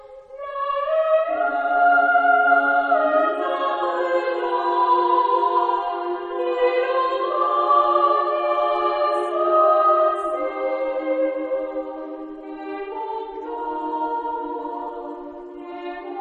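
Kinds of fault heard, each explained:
Nothing here stands out as a technical fault; the audio just carries on steadily with no glitches, dropouts or odd artefacts to point at.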